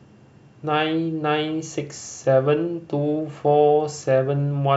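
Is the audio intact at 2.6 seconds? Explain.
Yes, at 2.6 seconds the speech plays through intact, with no audible fault at that moment.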